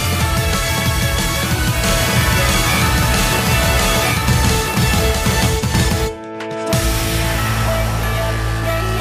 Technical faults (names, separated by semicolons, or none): doubled audio track